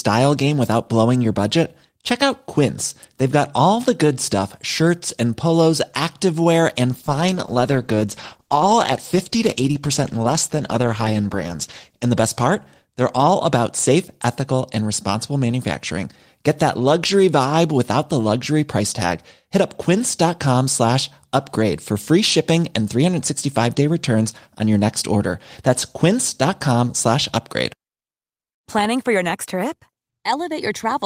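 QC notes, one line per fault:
6.9–13.83 s, call bitrate drop: right after "shirts and polos activewear" the sound turns rough and muffled with the top end shaved off, which fits the encoder being squeezed from around 32 kbps to about 13 kbps. It's worst for roughly 4.9 s and clears by "ethical and responsible manufacturing".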